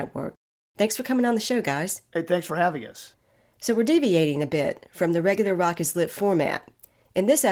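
No technical faults are audible.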